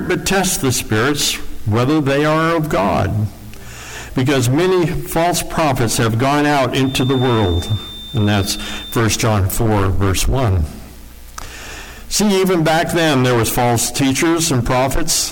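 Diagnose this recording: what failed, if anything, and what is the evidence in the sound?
A feedback whistle at 3.6 kHz runs from 6.77 to 9.06 s, thin and at one pitch, around 15 dB below the sound, swelling and fading slowly. A spectrogram shows one horizontal line. The likely cause is a loudspeaker-to-microphone loop in the analogue stage, held at the edge of oscillation.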